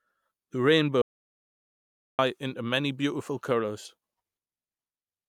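At 1.02 s the speech cuts off abruptly into an audio dropout to silence lasting about 1.17 s, until 2.19 s. The gap is silent with no room tone, most likely from lost input while recording continued, so that stretch of speech is gone.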